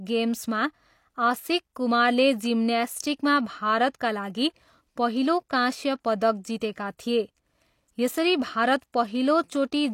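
A brief smear of hiss just ahead of a sharp onset at about 6.60 s in this speech clip, softening the attack, is pre-echo: the transform codec spread quantisation noise across its block, so noise meant for the loud onset leaked about 10 ms into the quiet before it.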